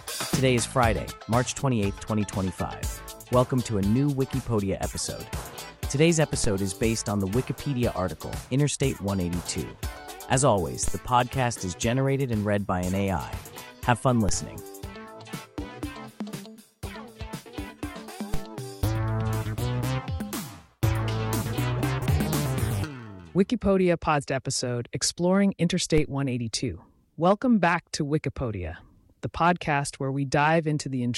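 The waveform's zero line jumps abruptly by about -17 to -16 dBFS at 6.44, 10.88, 14.29, 18.34 and 25.98 s, a DC step each time, with the offset then draining away through a 5 Hz high-pass, so each jump lands as a brief low thump while the sound carries on unchanged.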